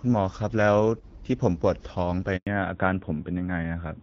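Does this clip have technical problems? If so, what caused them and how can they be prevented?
Yes, there are two. At 2.37 s the speech cuts out and stays silent until 2.47 s. That's a handover gap: the phone switched the call from one network to another, and for those 100 ms no speech frames arrived, so the sound dies away fast and whatever was said in that window is simply gone. To prevent it, tune handover timing and use make-before-break handovers so frames keep flowing while the links switch.

Right after the gap, from 2.47 s to the end, the audio loses everything above 4 kHz and sounds duller and rougher. That's a fallback to narrowband. Before the handover the call was on the AMR wideband (HD Voice) codec, and the clear, lightly coded sound fits its 12.65 kbit/s mode. The new link brought the call back up on the older narrowband codec, which sounds like its 12.2 kbit/s mode, and that codec can't carry anything past 4 kHz. 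To prevent it, make sure the target network and both ends support and negotiate AMR-WB, so HD Voice survives the handover.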